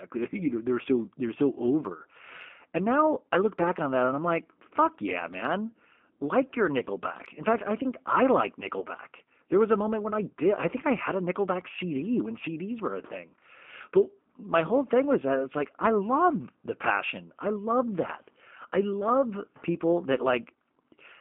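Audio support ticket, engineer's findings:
G.729 codec, whole clip. Band-limited, roughly 200 Hz to 3.4 kHz, nothing on top. Speech clearly rough and a bit synthetic, plainly audible codec damage. Likely component: the VoIP leg's encoder, which sounds like G.729A at 8 kbit/s. Each 10 ms frame is rebuilt from a vocal tract filter, pitch predictor and a handful of pulses, so fine detail is lost and the voice turns gritty.

VoIP packet loss concealed by the speech codec, 8.79 to 8.86 s. Short smear, about 30 ms of audio gone, pointing to a single dropped packet. Component: decoder concealment. It stretched the last pitch and filter with fading gain, then took a few frames to recover after audio resumed, so the damage runs to about 74 ms, well past the gap itself.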